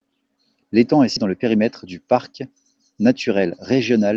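At 1.16 s the speech lurches forward: about a third of a second of sound is simply gone, with no gap or fill, and the two sides butt together almost seamlessly. This is a skip ahead. Later audio was already queued, and the missing stretch was dropped to catch up.

From 1.25 to 2.64 s the speech sounds slightly rushed while its pitch stays unchanged, running at about 108% of normal speed. The same hurried quality returns from 3.28 to 3.91 s at about 107%. Both passages are jitter buffer speed-up. The receiver held more audio than it wanted, so it repeatedly trimmed pieces one or a few pitch periods long. That removed roughly a tenth of a second in the first passage and about half that in the second, shrinking the delay without shifting pitch. Throughout, the sound tops out near 12 kHz, consistent with the Opus call path it travelled through.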